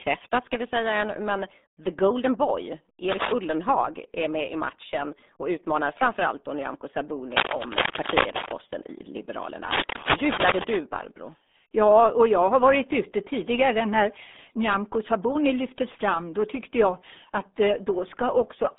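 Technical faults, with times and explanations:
Throughout, RealAudio 14.4 codec: speech is confined to roughly 200 Hz to 3.6 kHz with nothing above 3.8 kHz, and the heavy gargling points to an 8 kbit/s dial-up speech coder.
3.10–3.33 s, 7.31–8.53 s and 9.71–10.76 s, cable scratch noise: dense, uneven rustling bursts rise about 5 dB above the speech, likely from a worn contact whose resistance fluctuated as it moved.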